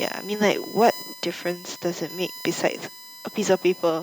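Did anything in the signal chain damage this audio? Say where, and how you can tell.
Yes, in three places along the chain.

USB whine enters at the analogue wiring stage and runs through the whole clip. It is a fixed-pitch tone on a 1 kHz fundamental, with its harmonics peaking around 5 kHz, sitting about 15 dB below the speech. The 1 kHz spacing matches the USB bus's 1 ms frame rate, with current pulses leaking through power or ground. Mains hum would instead sit at 50 or 60 Hz and its low multiples, and it would not carry this bright, kHz-range comb.

Microphone overload happens at the converter, at 0.81 to 0.89 s, 2.64 to 2.66 s and 3.51 to 3.54 s. Each time, the loudest peaks hit the converter's limit and flatten, giving a harsh crackle. The first is the worst, pushing about 4 dB past the limit with about 7% of samples cut. The later two are milder, at about 1 dB and 2 dB. The likely cause is an input volume set too high. 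Codec distortion would smear across quiet passages too, while this appears only on the peaks.

The microphone volume stepped down at 1.02 s, in call processing. Speech and background drop together by about 3 dB in one abrupt step, just after the worst overload. This is likely the call software lowering the device's input level in response. An automatic gain control or compressor would ride the level smoothly and recover, whereas this is a single permanent step. Peaks still clip afterwards at 2.64 s and 3.51 s.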